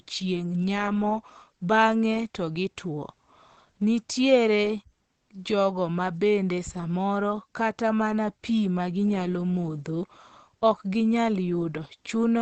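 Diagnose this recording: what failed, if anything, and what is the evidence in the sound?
The damage sits at the codec stage and runs the whole length of the speech: it sounds muffled and hoarse, with nothing above 8.4 kHz. That narrowed, wideband-limited top plus the hoarse texture is the signature of Opus compression, likely at a low rate around 16 kbps. At that budget the encoder drops into its SILK speech mode, modelling the voice parametrically and discarding the upper band outright, so the artefacts are plainly audible throughout.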